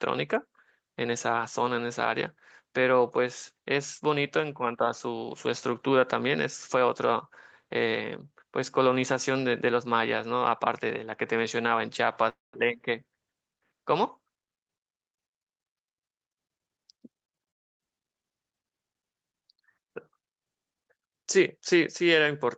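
At 12.29 s the sound breaks off for about a quarter of a second, until 12.55 s. This is a long network dropout, likely from a stall in packet delivery. The receiver stretches the last sound into a brief fading buzz, then leaves roughly 0.17 s of near silence, and the audio resumes with that stretch lost. On a waveform it looks like a short tapering tail followed by a flat gap. On a spectrogram, smeared horizontal streaks fade into an empty column.

Just after 17 s come three short concealed packet losses, at 17.25, 17.36 and 17.43 s. Each drops about 40 ms of audio. The receiver patches the hole by extending the preceding sound for about 30 ms, heard as a quick smear or wobble. On a spectrogram each shows as a small blurred patch inside the band that stops near 8 kHz.

At 17.50 s a second long network dropout follows, likely another interruption in the connection, and it lasts until 17.96 s. 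About 0.3 s is missing and is heard almost entirely as silence, so the cluster of smears runs straight into a dead gap. On a waveform, the envelope collapses to a flat line across that span. On a spectrogram it shows as a blank vertical band before the signal returns.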